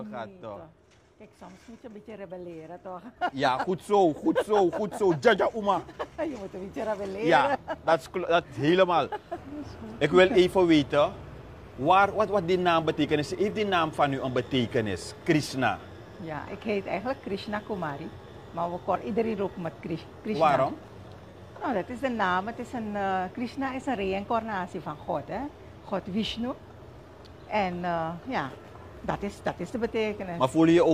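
AAC frame loss with concealment occurs at 21.30 to 21.36 s, a brief patch where the sound turns smeared and noisy instead of carrying on cleanly. The decoder is missing data and fills the gap by reusing the last good spectrum with altered phase, which sounds papered-over rather than silent. The concealed stretch is only about 43 ms of missing audio, which fits a single lost frame, so playback recovers almost at once with no fade-out.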